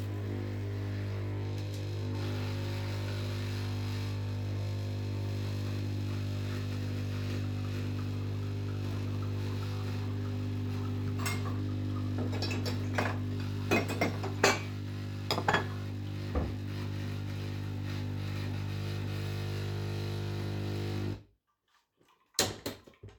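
Nothing here calls for comment, as the sound carries on without any technical faults worth pointing out.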